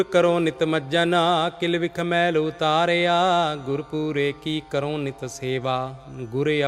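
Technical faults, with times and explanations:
No technical faults are detectable anywhere in the recording.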